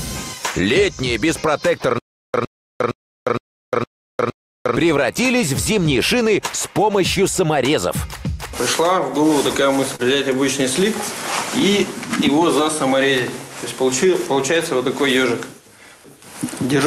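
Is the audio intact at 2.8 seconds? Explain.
No. At 2.8 s the sound is inside a stutter with silent gaps running from 1.98 to 4.76 s. The same 108 ms fragment plays six times, each followed by about 355 ms of dead silence, repeating every 463 ms, most likely a stalled stream replaying its last buffer. The real audio for that span is lost. On a waveform, identical short blocks alternate with flat silent stretches. A spectrogram shows repeated matching slices separated by empty columns.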